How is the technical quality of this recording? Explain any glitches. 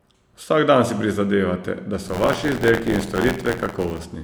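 From 2.07 s to 4.03 s the speech takes on a robotic buzz at about 86 Hz. This is buffer tearing: writer and reader of the playback ring buffer have slipped, so roughly a tenth of each 512-sample-sized period replays audio about 40 ms old, with hard joins repeating at the buffer rate.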